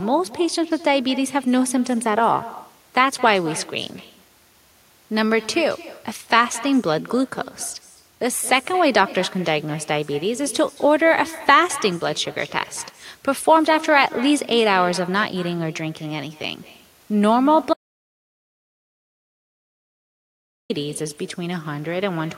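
It's a speech recording with echo with no canceller running the whole way through: every phrase comes back about a fifth of a second later as a quieter, thinner copy, about 18 dB down, the classic sign of the far end's loudspeaker feeding its own microphone with nothing cancelling it. Then there's an audio dropout to silence from 17.73 s to 20.70 s, nearly 3 seconds of dead silence with no room tone at all, likely from the input device or link dropping out while the recorder kept writing.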